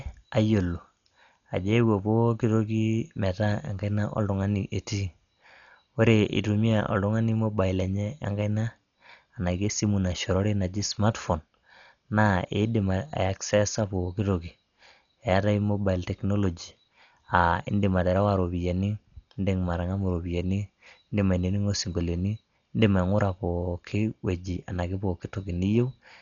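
Throughout the 26 seconds, the speech sounds dull and boxed-in, with a rough, fluttering haze clinging to the voiced sounds. The damage is heavy and points to likely Dolby Digital compression at a very low bitrate, around 40 kbps: the encoder cut the band and left many frequency lines without real detail, filling them with noise. On a spectrogram, everything stops at a flat ceiling near 7 kHz, and the gaps between harmonics show grainy, speckled noise.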